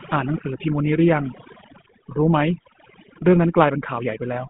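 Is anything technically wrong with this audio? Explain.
Yes, two problems run through the whole clip. First, there's overdone noise removal. The noise reducer was pushed too hard, so individual frequency bands near its noise estimate get clamped down along with quieter bits of the voice. The background drops and breaks up into little twinkling specks.

Second, the voice has gone through the GSM full-rate codec, which fits a 13 kbps phone link. The codec rebuilds speech from a vocal-tract model fed by a sparse pulse train, giving a plainly audible buzzy, gravelly roughness. The band sits roughly 150 Hz to 3.5 kHz, with nothing above 3.8 kHz.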